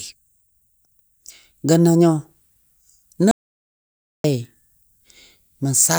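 At 3.31 s the speech is cut off by an audio dropout to silence lasting about 0.93 s, until 4.24 s. The gap is silent, with no room tone. The input was likely lost while recording continued, so that speech is gone.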